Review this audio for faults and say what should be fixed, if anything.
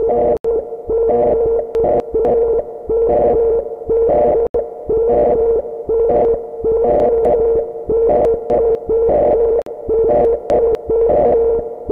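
Bluetooth dropouts cut the sound to silence at 0.37–0.45 s and 4.47–4.55 s (about 76 ms each) and at 9.62–9.68 s (about 46 ms). The likely cause is wireless packets arriving too late for the headphones. Unlike reordering, material is genuinely missing, and playback resumes further on as if it had kept running. To prevent this, keep the headphones close to the source, away from interference, and allow a larger receive buffer.

Chunks out of order garble the sound at 1.75–2.25 s, 6.25–7.25 s, 8.25–8.75 s and 10.25–10.75 s. Here 250 ms blocks play one block late, or three blocks late in the 6.25 s stretch. Nothing is lost, which separates this from a dropout. Instead, the same material is heard shuffled, with three hard joins. To prevent this, fix the buffering or threading so that each block is written strictly in sequence.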